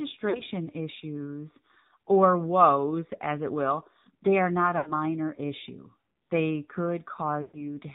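AMR narrowband mobile codec coding runs through the whole speech clip: nothing above 4 kHz survives, and the voice has a buzzy, synthetic edge, which fits a low rate near 7.4 kbps, where the vocal-tract model gets too few pulses per frame. Lost AMR speech frames appear three times. From 0.30 to 0.42 s, just before "issues or woes as", there is a short warbling dip. From 4.78 to 4.93 s the sound stretches and sags. From 7.42 to 7.67 s it drags out and fades toward silence. Each time the decoder repeats the last good pitch and spectral settings at falling gain, consistent with runs of about two, four and six missing 20 ms frames.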